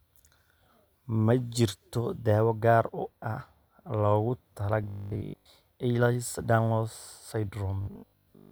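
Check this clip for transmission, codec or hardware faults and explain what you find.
Two stretches of robotic sound from repeated short buffers, at 4.84 to 5.50 s and from 7.81 s to the end at 8.51 s. Audio likely arrived too seldom, so playback looped the last chunk, which fits a 20 ms buffer, for most of each stretch while the real speech was dropped. That loop imposes a fixed 50 Hz pitch, turning the speech into a rigid metallic buzz that only loosely tracks the words.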